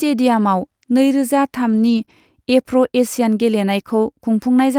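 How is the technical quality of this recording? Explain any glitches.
The recording has network packet-loss damage in one stretch of the speech, from about 1.65 s to 2.11 s, and two related faults follow one another there.

Between 1.65 s and 2.03 s the speech turns rough and grainy, noisier, with no dropout. This is a lost packet rebuilt from error correction. Ten separate lost packets, covering about 200 ms of audio, were replaced by the low-bitrate backup copies carried in the following packets. The same coarse texture returns briefly from 2.09 s to 2.11 s, where one more 20 ms stretch was rebuilt the same way.

Between those two spots, from 2.05 s to 2.09 s, there is a quick smear or wobble. This is short concealed packet loss. About 20 ms of audio never arrived and no backup copy was available. The decoder filled the hole by extending the preceding sound, carrying its pitch forward if it was voiced or substituting shaped noise if it was not, then blended back into the real signal.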